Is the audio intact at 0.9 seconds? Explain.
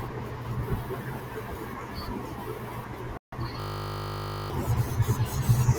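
Yes, the speech at 0.9 seconds is intact, with no dropout, click, distortion or other audible fault at that moment.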